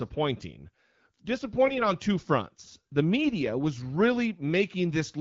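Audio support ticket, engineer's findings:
AMR bit errors, 1.66–1.82 s, just before "on two fronts the". Hoarse, scratchy, gargly, with pitch and level roughly kept. Cause: a weak link flipped less-protected frame bits and the checksum still passed. The result is misplaced excitation pulses and wrong pitch, gain and spectrum values. The span fits about seven 20 ms frames at a bit error rate of a few percent.

AMR-WB carrier working normally: clear speech with light codec damage, consistent with 12.65 kbit/s.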